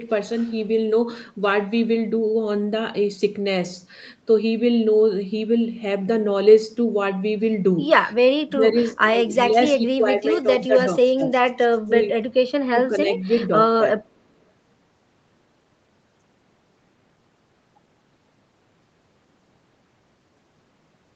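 From 8.47 to 14.03 s, speech dips repeatedly: 8.47–9.05, 9.48–11.31, 11.86–12.3, 12.74–13.5 and 13.96–14.03 s. Drops reach about 15 to 20 dB, with the one at 12.74 s only about 5 dB. This is likely speech suppressed in double talk. The echo canceller turns the talker down along with the other side. Two faint repeats, at 8.88 s and 13.35 s, trail the voice by 337 ms. They sit about 30 to 35 dB below the speech. This is likely echo leak, where loudspeaker sound slips past the canceller and returns.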